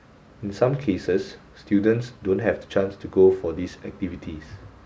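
Speech, with no audible technical fault anywhere in the recording.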